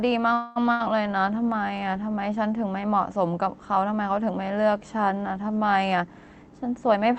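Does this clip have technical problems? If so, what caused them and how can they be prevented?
Yes. From 0.33 to 0.58 s the sound stalls into a fading buzz or hiss for about 0.22 s, then carries on from where it stopped with nothing lost. This is likely a call audio freeze: delayed packets let the jitter buffer run dry, and the receiver stretched the last sound until they arrived. A more stable network path, or a jitter buffer allowed a little more target delay, would prevent it.

Shortly after, between 0.72 and 0.82 s, the sound breaks into a brief decaying buzz or hiss and resumes slightly further on, with about 80 ms skipped. That is a burst of packet loss: consecutive packets never arrived in time, so the receiver concealed the gap with a fading continuation of the preceding sound. Forward error correction or redundancy in the codec, together with reducing congestion on the link, would prevent it.

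From 5.92 to 6.97 s the speech sounds rushed, running at about 121% of normal speed while keeping its pitch. This is a jitter buffer speed-up: the buffer had built up extra delay, so the receiver trimmed short pitch-period slices, around a fifth of a second in total, to catch up. Smoother packet delivery, so delay doesn't pile up and then need draining, would prevent it.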